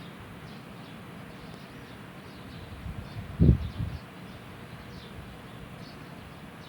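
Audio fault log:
No faults are audible, with nothing pointing to a problem anywhere in the recording or playback chain.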